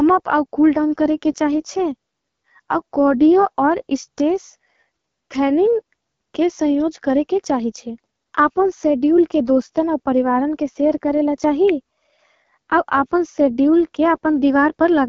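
From the start, the speech carries the rough, raspy texture of the AMR wideband (HD Voice) codec. The coder models the voice with pulses through a vocal tract filter and fills the top band with shaped noise. Damage this plain fits one of its lowest rates, around 8.85 kbit/s.

At 11.69 s, right after "परिवारन के सेर करेला", a sharp snap or a tight cluster of clicks cuts in on top of the sound. This is an electrical switching spike. A nearby switch, motor or static discharge likely arced briefly, and the audio line picked it up.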